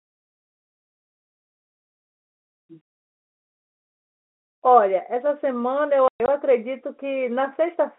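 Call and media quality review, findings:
Packet loss filled with silence, 6.08–6.28 s: speech chopped by hard-edged dropouts totalling 140 ms over 200 ms, longest run 120 ms, which fits lost 20 ms packets. Silent gaps on waveform, vertical clicks at edges on spectrogram. Jitter buffer/network path; G.711 band-limited narrowband audio intact.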